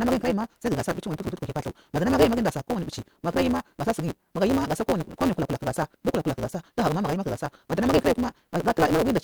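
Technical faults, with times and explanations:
Throughout: block size mismatch (truncated). Each block's tail is discarded, so the speech runs 1.88 times fast at about normal pitch, with a 172 Hz buzz from the cuts, which fits 256-sample reads. Spectrograms show dense vertical striations; waveforms show a jump every 5.8 ms.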